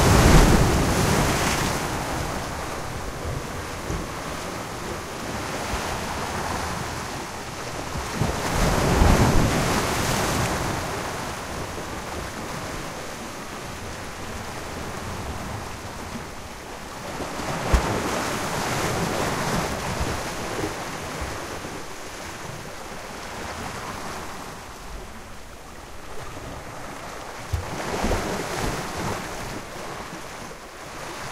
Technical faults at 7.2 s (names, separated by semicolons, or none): none